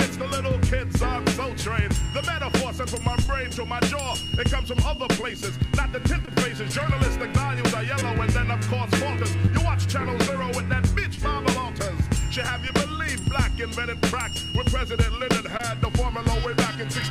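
A received audio stream with short concealed packet loss at 3.23, 6.25, 7.99, 9.45, 11.15, 12.67 and 15.57 s. Each time about 20 ms of data arrived too late for the decoder. The receiver extrapolated the preceding sound to fill the gap, then crossfaded back, leaving a brief smear.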